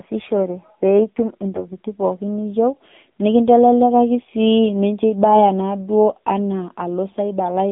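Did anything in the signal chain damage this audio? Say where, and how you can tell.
Yes. At the codec stage, AMR narrowband mobile coding runs throughout. Sound stops near 150 Hz and 3.7 kHz and is buzzy and synthetic, fitting a 7.4 kbps mode.

At the network stage, AMR bit errors occur from 1.54 to 1.66 s. Pitch and level hold, but the sound turns hoarse and gargly. This suggests about six corrupted frames.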